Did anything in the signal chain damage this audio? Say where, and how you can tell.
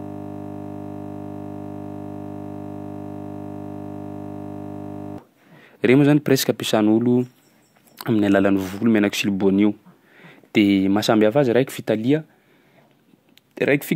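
Yes. A system hang loop at the driver buffer stage runs from the start until 5.18 s. With the driver frozen, the sound hardware replays one 20 ms buffer, which is heard as a steady 50 Hz buzz.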